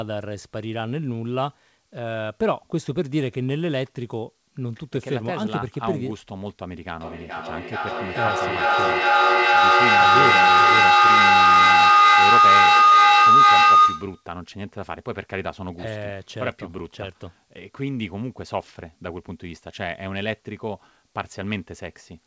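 From 6.94 to 14.31 s, a rising tone near 1.5 kHz, pulsing about every 400 ms and peaking about 13 dB above the speech, is a feedback howl from a microphone-loudspeaker loop gaining level each pass.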